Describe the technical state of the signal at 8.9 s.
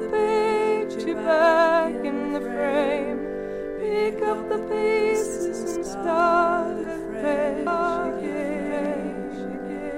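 A doubled audio track, likely from a slower second capture path, runs from 7.67 s to the end, laying a somewhat quieter copy about 1.5 s behind.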